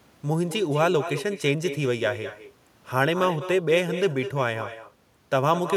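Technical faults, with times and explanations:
throughout, echo with no canceller: uncancelled loudspeaker pickup returns speech about a fifth of a second later, about 12 dB down, as faint trailing copies on the spectrogram.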